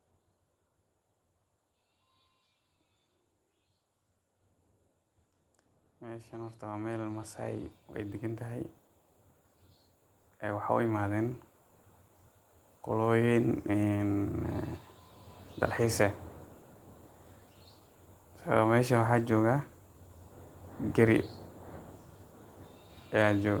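From 6.0 to 7.42 s, automatic gain rising lifts the level by about 6 dB. It happens again from 10.25 to 11.44 s, by about 4 dB. Voice and background swell together as the gain control boosts quiet input.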